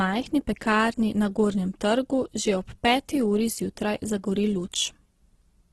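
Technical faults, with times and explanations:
Throughout, Opus compression: speech sounds rough and grainy rather than MP3-like swirly, with nothing above 12.1 kHz, likely from noise-filled bands at roughly 12 kbps.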